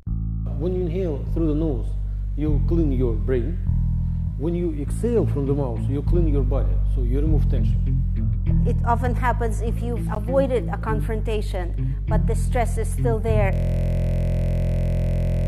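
At 10.15 s there's a gap between stream segments: the time stamps of two consecutive chunks don't quite meet, so the player drops in about 14 ms of hard-edged silence. Nothing's actually missing from the audio, it's just pushed later by that hole.

From 13.53 s to the end you get a system hang loop. The machine froze while the sound hardware kept replaying its ring buffer, so a 23.2 ms slice repeats at 43.1 Hz, which fits a 1024-sample buffer, turning into a steady buzz.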